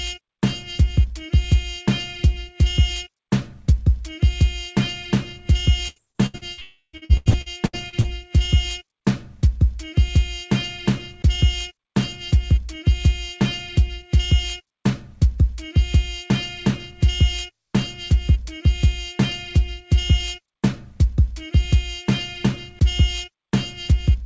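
Repeated packet loss (robotic sound) runs from 5.88 to 6.60 s: five short holes, the longest 82 ms, are each patched by stretching the last bit of sound, so about 37% of that span is synthetic fill, giving a choppy, robotic texture with pieces missing.

From 6.61 to 6.96 s comes what is likely a long network dropout: the preceding sound is drawn out as a fading buzz for roughly 0.32 s, ending in about 70 ms of silence before audio resumes without the lost part.

Repeated packet loss (robotic sound) returns from 6.97 to 8.07 s, with eight holes, the longest 85 ms, and about 36% concealed, so the same choppy, robotic effect continues. Throughout, the call path leaves nothing above 8 kHz, which fits a G.722 codec at 64 kbps.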